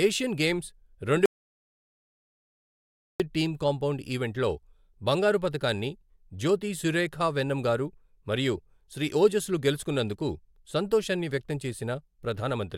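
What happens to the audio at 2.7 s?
An audio dropout to silence runs from 1.26 s to 3.20 s, so at 2.7 s the speech is simply absent. Right after "ఏషియన్ గేమ్స్" the sound cuts off mid-flow, leaving silence with no room tone. It returns abruptly on "డ్ టీమ్ కాంపౌండ్ ఈవెంట్", already partway into a word. The likely cause is a lost input, such as a disconnected device, a failed link or a stray mute, while the recorder kept writing silence. About 1.9 s of speech is unrecoverable.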